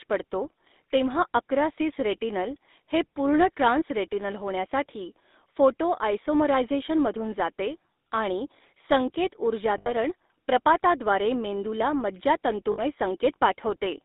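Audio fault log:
throughout: GSM full-rate codec, the speech squeezed through a narrow 250 Hz to 3.7 kHz band with that buzzy, gravelly roughness from coarse pulse excitation, plainly audible, consistent with about 13 kbps.
9.78–9.93 s and 12.72–12.81 s: lost GSM frames, the last good frame held and repeated, giving a brief metallic ring, the first just before "प्रपाताद्वारे मेंदूला".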